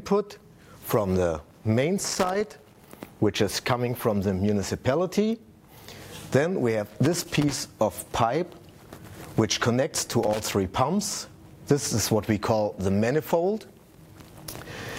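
Loose connector crackle breaks in three times: from 2.08 to 2.90 s, from 6.86 to 7.58 s, and briefly from 10.23 to 10.44 s. A worn or dirty contact is making and breaking as it shifts, chopping the signal into irregular scratchy bursts. Unlike steady digital clicks or a dropout, each burst is ragged and uneven in spacing, and the sound stutters rather than cleanly vanishing.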